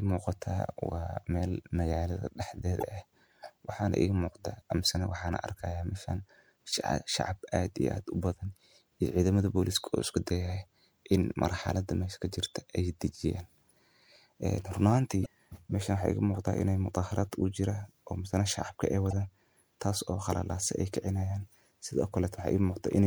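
Speech with damaged data in a compressed stream at 2.79–2.83 s, 15.22–15.27 s and 19.11–19.13 s, each heard as a brief chirp or blip. The decoder misreads corrupted frames and resyncs.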